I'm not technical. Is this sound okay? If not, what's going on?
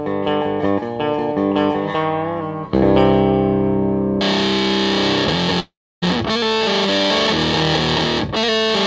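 No. A long network dropout hits from 5.60 to 6.04 s, likely caused by a stretch of audio that never arrived. The player stretches out the last sound into a fading buzz and then silence, and the sound resumes with that missing part gone for good.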